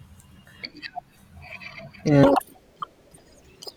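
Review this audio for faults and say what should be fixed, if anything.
From 2.23 s to 3.77 s, a section at the wrong speed plays 1.94 times fast and about ten semitones high, likely from a clock mismatch. On a spectrogram the harmonics jump upward, and the waveform looks compressed in time. Keep sample-rate and clock settings consistent from recording through editing and playback.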